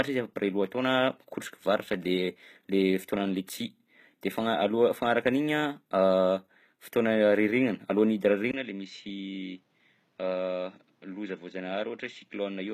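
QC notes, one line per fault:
Throughout, HE-AAC compression (likely): the treble above the coded core is rebuilt from copied lower bands, so s sounds come out gritty and lispy and nothing reaches past 14.9 kHz. The damage is plainly audible, which fits a low bitrate around 20 kbps.
8.51 s to the end, input switched to a poorer device (likely): after a 20 ms gap the sound turns dull and boxy, capped at 7.6 kHz, drops by roughly 10 dB, and picks up a new faint noise floor well below the signal.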